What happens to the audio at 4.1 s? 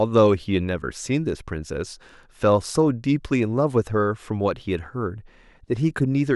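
Nothing goes wrong at 4.1 s; the speech carries on intact through that moment, with no dropout, click or distortion.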